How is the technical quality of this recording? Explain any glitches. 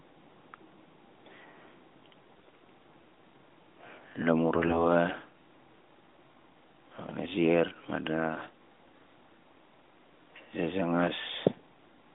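The recording is narrowband mobile audio, carried by the AMR narrowband mobile codec with its top end ending around 3.6 kHz, and it has two short glitches from AMR bit errors, at 2.36 to 2.52 s and at 4.56 to 4.85 s. On a weak link, roughly one in ten of the less-protected bits in each frame arrived flipped, while the check on the critical bits still passed. The decoder therefore misplaced its excitation pulses and misread fine pitch, gain and spectral values, so the sound keeps its level but briefly turns hoarse, scratchy and gargly.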